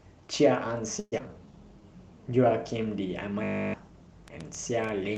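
From 0.99 to 1.21 s the speech smears into a fading buzz for about 194 ms, then about 40 ms of silence. A long network dropout is the likely cause, and roughly 100 ms of audio is never heard.

From 1.21 to 1.82 s the speech drags at about 84% speed with unchanged pitch, adding 102 ms. This is a jitter buffer slow-down, rebuilding reserve after the target delay rose by roughly 30 ms.

From 3.44 to 3.74 s a steady 50 Hz buzz replaces the speech. One 20 ms slice repeats 15 times in a system hang loop, swallowing about 0.3 s of audio.

From 4.28 s to the end, irregular pops arrive at about 5.7 per second, peaking roughly 10 dB above the speech. This train of clicks likely comes from nearby interference or a struggling interface.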